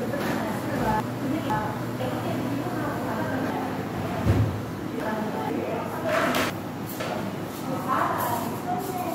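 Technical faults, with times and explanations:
1.0–2.0 s, 3.5–5.5 s and 6.5–7.5 s, chunks out of order: each stretch sounds briefly jumbled. Half-second chunks are being played in the wrong sequence. At 1.0 s and 6.5 s, one chunk arrives a single slot late, so two neighbours swap. At 3.5 s, a chunk is held back behind the three that should follow it. Nothing goes missing, but each misplaced chunk creates three abrupt joins.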